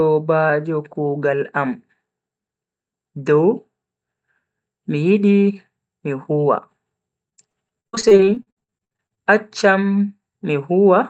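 From 7.29 to 9.19 s, repeated packet loss (robotic sound) breaks up the speech. Twenty-three short gaps, the longest 60 ms, are each patched by extending the preceding sound. Unlike one isolated dropout, these holes recur rapidly, producing a choppy texture.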